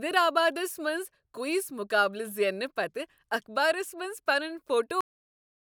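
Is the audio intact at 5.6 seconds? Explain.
No, that's inside a cut-off end: right after "اخبارس منز پنن" at 5.01 s the final buffers never got written, so the speech stops mid-sound into dead digital silence through 5.75 s.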